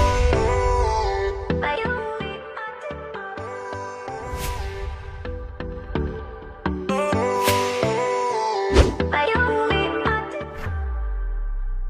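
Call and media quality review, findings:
Zipper noise at 1.40–2.44 s (about 10 dB down), 5.56–6.04 s (about 10 dB up, 1 dB steps), 10.04–10.68 s (about 20 dB down, 1 dB steps). Gain control steps unsmoothed, roughly thirty per second, each step ticking.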